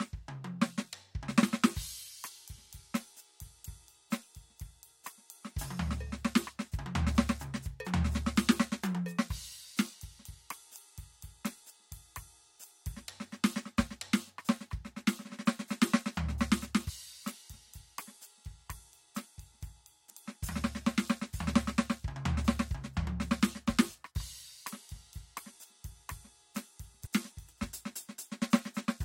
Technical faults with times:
1.42 damaged data in a compressed stream
3.64 damaged data in a compressed stream
16.88 damaged data in a compressed stream
20.09 damaged data in a compressed stream
27.05-27.08 damaged data in a compressed stream

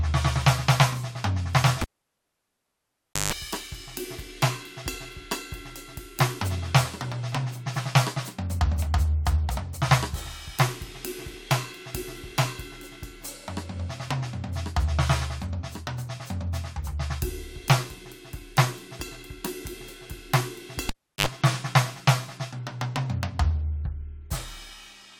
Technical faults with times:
1.81-3.33 cable pulled and plugged in
20.89-21.27 cable pulled and plugged in

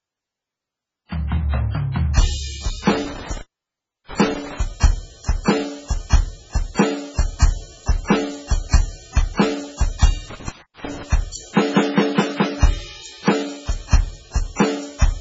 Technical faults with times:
0.00-15.20 MP3 compression
2.93-4.58 intermittent contact
10.30-11.03 intermittent contact

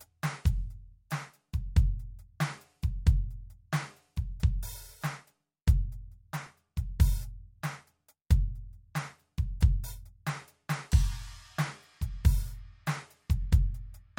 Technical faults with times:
6.46 repeated buffer

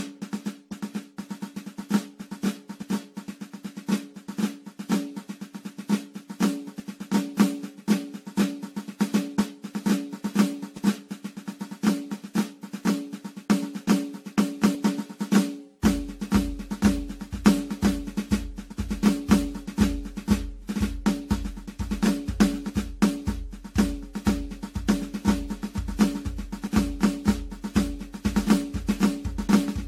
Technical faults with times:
0.00-29.88 generation loss

